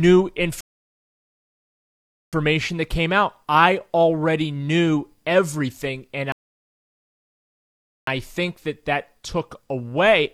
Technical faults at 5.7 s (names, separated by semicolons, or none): none